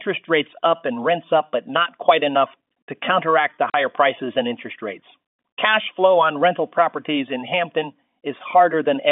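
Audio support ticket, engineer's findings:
Packet loss filled with silence, 3.70–3.74 s: receiver dropped 40 ms, fitting two 20 ms packets, and zero-filled the gap. Hard-edged hole between "enough to counteract the" and "prices and interest rates" on the narrowband G.711 telephone line.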